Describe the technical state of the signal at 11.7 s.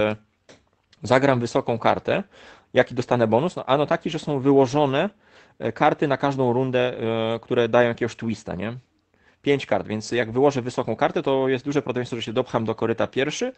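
At 11.69 s, between "wysoką kartę to jest" and "prawdopodobieństwo że się", one 20 ms stretch is a lost packet rebuilt from error correction: the decoder played the low-bitrate copy carried in the next Opus packet, so there is no gap, just a brief rougher, noisier patch rather than concealment's smeared or repeated sound.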